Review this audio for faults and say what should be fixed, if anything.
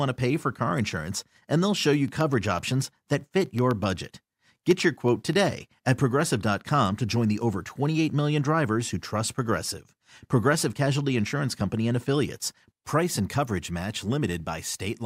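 Periodic USB or driver dropouts run from 1.96 to 5.83 s, starting just after "insurance and they'll show". About thirty tiny gaps, each well under a millisecond and filled with silence, recur every 0.125 s and are heard as regular ticks in the speech. Random clicks or a one-off underrun would not keep this strict eight-per-second spacing, which points to a background task stalling the bus or driver on a timer. Disable USB power saving and stop periodic polling tasks during recording.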